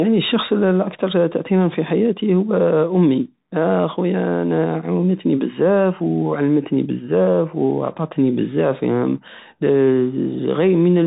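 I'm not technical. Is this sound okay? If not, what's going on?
No. The speech has gone through a Bluetooth CVSD headset codec, the basic call mode wireless headsets use, from start to finish. Nothing above about 3.8 kHz survives, so the voice sounds boxed-in and phone-like. What sets it apart from simple muffling is the clearly audible damage on top: s sounds come out scratchy, louder bright sounds crackle because the codec can't keep up with them, and a grainy hiss sits underneath.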